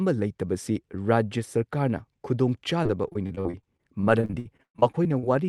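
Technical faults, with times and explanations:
2.83–5.25 s, repeated packet loss (robotic sound): over this stretch of speech the call path kept losing or receiving late packets, 22 gaps in all, the longest about 118 ms. Each hole was papered over by stretching the preceding sound, roughly a quarter of the span, before the next loss arrived. The repeated patching makes the voice choppy, with fragments dropped, on top of an Opus-style band limit near 12 kHz.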